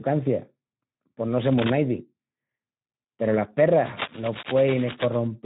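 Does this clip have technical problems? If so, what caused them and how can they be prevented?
Yes. The speech is coded with the Speex codec throughout. It sounds hoarse and noisy, cut off above 3.8 kHz, which fits roughly 11 kbps. Use a higher bitrate or a modern codec.

Cable scratch noise appears from 1.41 to 1.73 s, after "pos no", and from 3.78 to 5.28 s. It is a rough rustling about 5 dB below the speech, likely from a worn cable or connector being moved. Replace worn cables and secure connectors.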